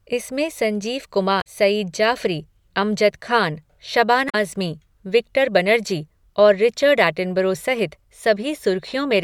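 A brief glitch breaks into the speech from 1.38 to 1.47 s and again from 4.26 to 4.35 s. Both come from damaged data in a compressed stream: corrupted bytes make the decoder misread frames, lose sync and hunt for the next valid frame header.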